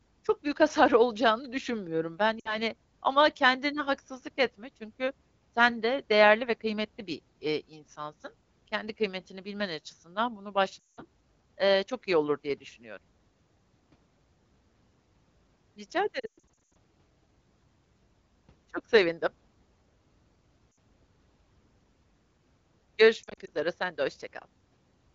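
Lost AMR speech frames break up the speech at 2.40, 10.82, 16.19 to 16.68, 20.74 and 23.23 s. The decoder repeats the last sound and fades it, for 180 ms just before "eee çok iyi olur".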